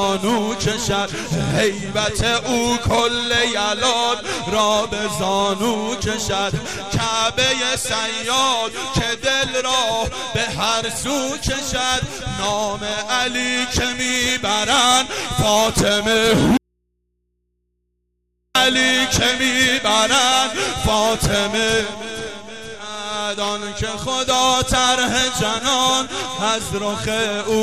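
At 16.57 s the sound cuts out abruptly, an audio dropout to a faint residue lasting about 1.98 s until 18.55 s. Only low mains hum, roughly 50 dB down, fills the gap, likely an open input left live. The waveform collapses to a near-flat band, and the spectrogram shows just thin low-frequency hum lines.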